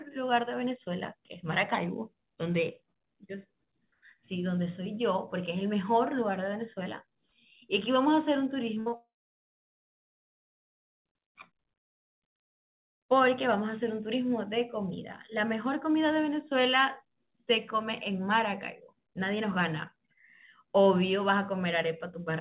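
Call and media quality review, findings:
Short concealed packet loss at 8.74 to 8.78 s and 8.90 to 8.94 s: brief smears of about 20 ms each, where the jitter buffer's concealment extended the preceding sound over the missing frames.

Burst of packet loss at 8.80 to 8.88 s: roughly 60 ms continued as a fading buzz or hiss before real audio returned, with the intervening content gone.

Long network dropout at 8.96 to 11.06 s: a short fading tail, then about 1.95 s of silence. Likely an upstream network outage, with roughly 2.08 s of audio never delivered. The band stops at 4 kHz throughout, which fits G.711 at 64 kbps.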